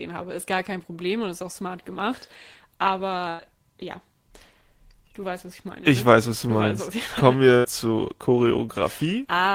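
Speech with two bursts of packet loss, at 3.29 to 3.41 s and 7.57 to 7.66 s. Each time, the last sound is stretched and faded to cover the gap. Speech then resumes further on, with about 100 ms and 80 ms missing.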